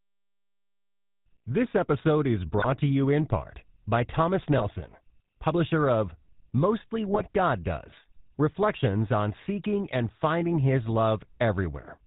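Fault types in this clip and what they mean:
GSM full-rate codec: Throughout, the speech has a buzzy, gravelly roughness and nothing above 4 kHz. A vocal-tract model driven by sparse, regular pulses causes this, which fits a 13 kbps coder. Unlike plain band-limiting, the harshness sits inside the voice itself.
GSM bit errors: Short squawks and gargling bursts occur at 2.58–2.66 s, between "episode is" and "to you in part", then at 4.58–4.67 s and 7.08–7.25 s. Corrupted filter, pitch or gain values warp individual frames. Unlike the steady codec roughness, these are brief and erratic.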